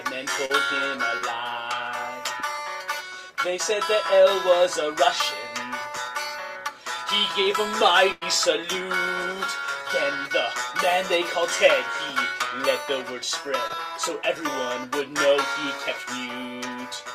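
Short concealed packet loss hits at 0.45–0.51 s and 1.17–1.24 s: about 40 ms missing each time, patched by stretching the preceding sound, so you get a quick smear. At 8.12–8.23 s comes a burst of packet loss. Roughly 100 ms vanishes and the gap is filled by a fading continuation, heard as a held buzz or hiss before the audio jumps ahead. A final 20 ms short loss at 13.67–13.71 s leaves a brief smear.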